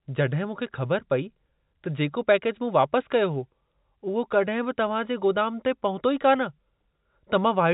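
No technical faults occur in this speech recording, which is carried over an ordinary telephone-band path with nothing heard above 3.8 kHz.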